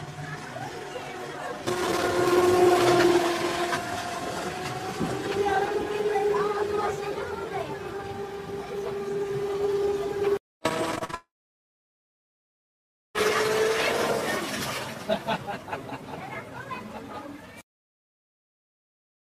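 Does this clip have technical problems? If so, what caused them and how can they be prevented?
Yes. From 10.95 to 11.15 s the sound turns choppy and robotic, with four short holes, the longest about 41 ms, patched by stretching the preceding audio over nearly half that span. This is repeated packet loss, where packets kept arriving late or not at all. A larger jitter buffer and forward error correction would help prevent it.

From 11.15 s a brief smeared continuation of the last sound fades into about 1.9 s of silence, and the audio returns at 13.16 s with roughly 2 s simply gone. This is likely a long network dropout, where nothing reached the receiver for that stretch. A more stable connection, such as wired rather than congested wireless, would help prevent it.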